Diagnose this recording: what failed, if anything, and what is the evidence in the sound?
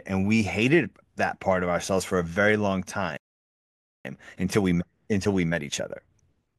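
At 3.17 s the speech cuts out mid-flow and the output sits in dead silence until 4.05 s, a gap of about 0.88 s, before the talker resumes. This is a playback stall at the playback stage, in the player's buffer handling. The most likely cause is that the player's buffer ran dry or its output thread was held up, so nothing reached the converter until data arrived again and the player recovered.

From 4.05 s to the end the speech runs noticeably fast, about 1.15 times normal speed, yet the pitch stays where it was. That is time-compressed catch-up, also at the playback stage. Having fallen behind during the stall, the player trims its backlog by dropping short slices of audio and cross-fading across the joins, which shortens the timeline without shifting pitch.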